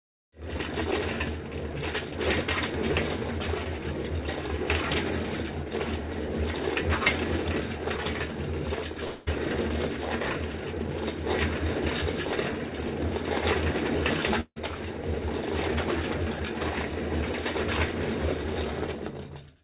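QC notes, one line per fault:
9.04 to 9.29 s, long network dropout: a brief buzzy smear stands in for about 0.22 s of lost audio, then the sound resumes further on. This is likely missing packets that the receiver filled by extending the last sound.
14.41 to 14.58 s, long network dropout: a fading buzz covers the gap, then drops to about 60 ms of silence before the sound returns without roughly 0.16 s of material, likely a packet loss outlasting concealment.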